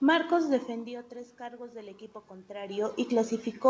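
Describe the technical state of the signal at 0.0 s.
At 0.0 s the signal is intact, with no technical fault present.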